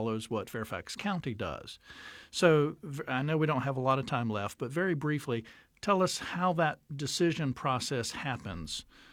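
No technical faults can be heard anywhere in the speech recording. Nothing in it calls for a timestamp or a correction.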